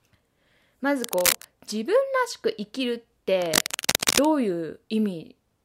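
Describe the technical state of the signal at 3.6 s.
At 3.6 s the speech is overlaid with cable scratch noise. It runs from 3.41 to 4.25 s. Dense, uneven bursts of scratching and rustling sit on top of the speech, at roughly the same level as the speech itself. The likely cause is a worn cable, connector or control being moved. Its contact resistance then shifts rapidly, and the signal picks up these bursts of noise for as long as the movement lasts.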